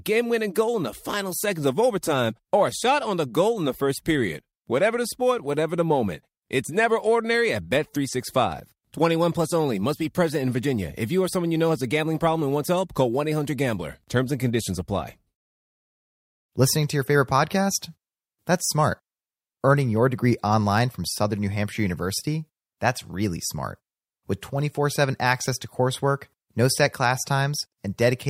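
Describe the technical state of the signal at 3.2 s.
Nothing is wrong with the signal at 3.2 s: the speech there plays through intact, with no dropout, click, distortion or other fault to be heard.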